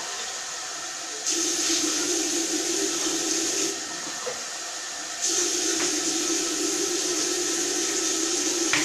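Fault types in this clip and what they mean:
Nothing stood out on listening to the sound in this clip.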